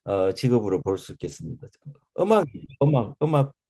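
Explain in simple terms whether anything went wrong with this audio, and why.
Two faults can be heard. From 1.23 to 1.37 s there is a lost packet rebuilt from error correction: some speech data never arrived, but a rough backup copy travelled in the following data, so about 80 ms were rebuilt. There is no gap, but that stretch sounds grainier and noisier.

From 2.65 to 2.69 s there is short concealed packet loss: about 20 ms of speech went missing, and the receiver filled the hole by extending the sound just before it. This leaves a brief smear or wobble.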